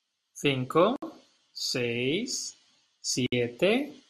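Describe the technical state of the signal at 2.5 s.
At 2.5 s the speech signal is intact, with no audible fault at that point.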